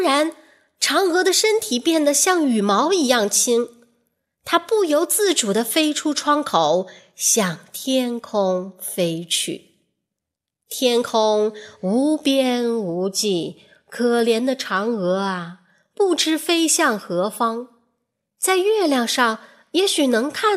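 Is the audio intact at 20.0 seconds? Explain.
Yes, at 20.0 seconds the audio is intact, with no fault audible at that moment.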